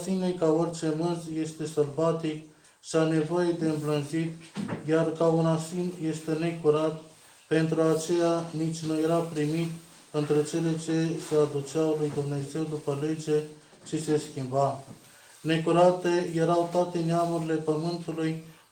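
Nothing stood out as a technical problem on listening.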